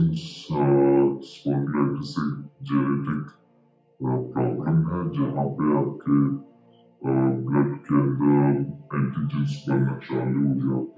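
From start to finish the sound is low and dragging, running at about two-thirds of normal speed and sitting roughly 7 semitones flat. This is a wrong sample rate fault: the audio is being played slower than it was captured, without conversion, consistent with 24 kHz material played back at 16 kHz.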